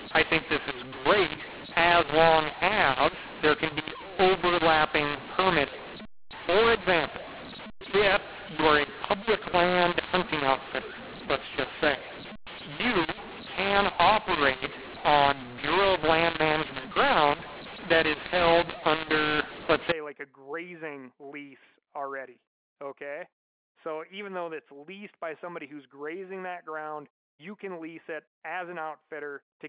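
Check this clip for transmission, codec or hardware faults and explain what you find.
One fault stands out, heard over the G.711 telephone coding, which passes nothing above 4 kHz. From 0.0 to 19.92 s, ending just before "like a grazing lease", the speech shows mu-law and A-law mixed up: samples coded as mu-law are decoded as A-law, scrambling levels. Speech turns harsh and gritty and pauses fill with hiss. The waveform looks jagged with a raised floor, and the spectrogram shows broadband noise across pauses.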